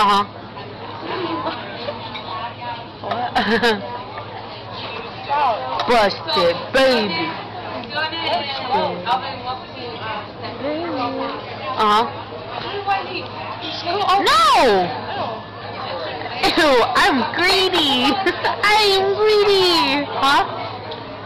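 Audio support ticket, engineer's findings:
No faults found in the audio for this ticket.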